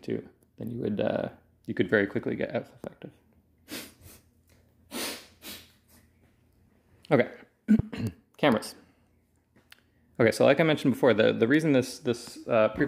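A single loud pop lands at 7.79 to 7.82 s, a sharp thump riding well above the audio, which continues underneath. It likely comes from a voltage spike such as a plug or switch transient. The waveform shows a brief spike towards 10 dB over the surrounding level, and the spectrogram shows a thin full-band vertical stripe.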